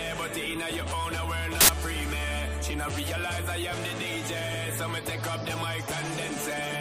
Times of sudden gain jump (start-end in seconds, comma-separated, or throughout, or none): none